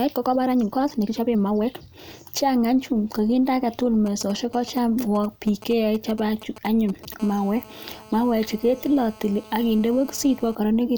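Time-stretched section from 0.0 to 2.1 s: the opening runs about 1.42 times faster than normal up to "chang anyuun kakinde", yet the pitch stays put. It sounds rushed, most likely because software shortened the passage by dropping small slices of audio.

GSM signalling bursts from 4.06 to 7.14 s: a nearby 2G phone exchanging brief control transmissions, with the audio circuitry rectifying its radio pulses. The result is a galloping dit-dit-dit of short 217 Hz buzzes, at roughly 15 dB below the speech.

GSM phone buzz from 7.20 to 10.55 s: a nearby 2G phone in continuous call-mode transmission, pulsing 217 times a second. Rectified in the audio path, it becomes a steady, hard, raspy buzz rich in harmonics, about 24 dB below the speech and unrelated to it.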